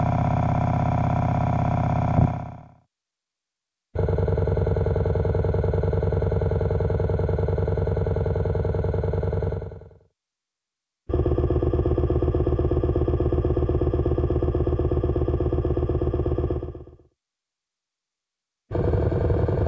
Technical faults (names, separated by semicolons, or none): skip ahead; jitter buffer speed-up